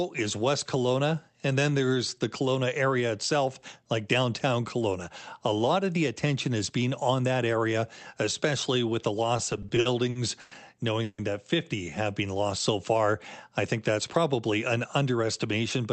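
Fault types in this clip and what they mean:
Repeated stalls (stutter): Between 9.37 and 10.52 s the speech halts ten times. Audio arrived late or too slowly, so the jitter buffer kept emptying and the receiver stretched the last sound to cover each wait. About 270 ms is filled this way, roughly a quarter of that stretch, with the longest hold at 100 ms. No speech is lost, but the passage drags and stutters instead of flowing.
Call audio freeze: From 11.03 to 11.19 s the sound stops advancing and the last fragment is held as a fading buzz that drops into about 50 ms of silence, 150 ms filled in all. The likely cause is packets held up in transit, starving the jitter buffer. When they arrive, speech resumes exactly where it paused, so the freeze inserts a gap and adds about 150 ms of delay without removing anything.
Jitter buffer speed-up: From 13.99 to 14.63 s the speech runs at about 110% speed with its pitch unchanged. 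The buffer held more audio than its target, so the receiver trimmed short pitch-period slices many times in quick succession to shed the excess latency, around 70 ms in total. The result is a brief hurried quality, with syllables slightly compressed while the voice keeps its normal pitch.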